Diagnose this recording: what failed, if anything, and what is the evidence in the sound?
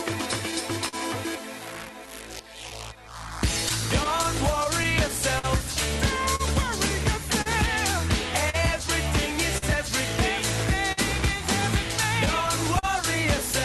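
Clock drift between sender and receiver, in the network and jitter-buffer stage: the sender's clock runs about 4% slow, so the buffer keeps draining and small timing hiccups recur unevenly throughout.

Scattered short gaps from network loss or lateness between 0.51 and 9.64 s: around fifteen brief holes, none much over 50 ms, each patched by extending the last sound, leaving ticks and smears.

A short stall from a late packet from 10.92 to 10.99 s: the jitter buffer ran empty, and the sound is held for 52 ms, then resumes with nothing missing.

Repeated stalls (stutter) between 12.25 and 12.85 s: three gaps, the longest 39 ms and 56 ms filled in total, as late packets kept emptying the buffer, so the audio drags and stutters.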